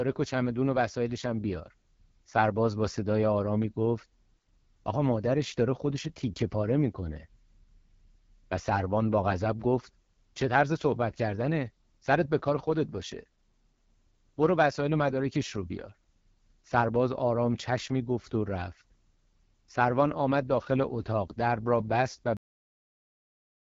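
AMR wideband (HD Voice) codec, throughout: the speech is squeezed through a pulse-excited vocal-tract model, and the damage is plainly audible as a rough, raspy edge. That fits one of the codec's lowest rates, around 8.85 kbit/s. Nothing sounds above about 7.5 kHz, and the top band is filled with shaped noise rather than real detail.

Cut-off end, at 22.37 s: the final buffers never reached playback, so the speech stops abruptly in the middle of a sound. It falls straight to digital silence with no natural decay, and that silence lasts to the end of the clip.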